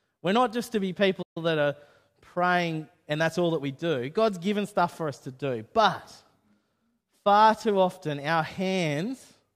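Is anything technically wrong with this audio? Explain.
Yes. There is a playback stall from 1.22 to 1.37 s, just after "not just to be" and before "that are praying and". The player likely ran short of buffered data or had its output thread held up, so nothing reached the output for roughly 134 ms. What you hear is the speech cutting to dead silence in mid-flow, a clear gap that doesn't belong to the speaker's rhythm, before the audio resumes and carries on.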